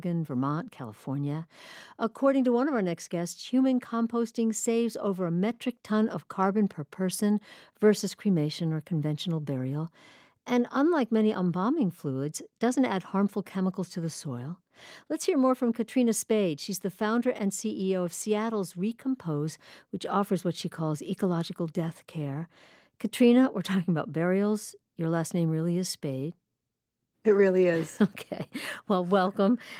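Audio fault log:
No fault found in the speech on listening; nothing to log.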